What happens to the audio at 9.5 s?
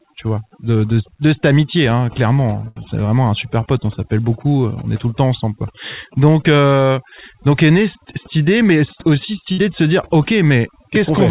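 At 9.52 to 9.60 s, right after "idée mais aussi cette" and before "de se dire", a burst of packet loss occurs. The receiver stretches the last sound for about 57 ms, fading it, then resumes later with roughly 60 ms skipped. That held, fading sound sets it apart from a clean dropout to silence.

Overdone noise removal is also present here, as throughout. Bands near the noise estimate are pushed down, so quiet parts of speech drop out over a near-silent, twinkling background. This differs from the call path's plain cutoff at 4 kHz, which removes top end without the warbling.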